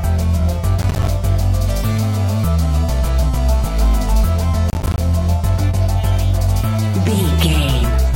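Processor overload crackle at 0.82 to 1.08 s and again at 4.7 to 4.98 s: the processor misses a run of audio buffers, each around 10 ms, and every miss drops a short hard-edged gap of silence, so the sound tears into gritty crackle until the load eases.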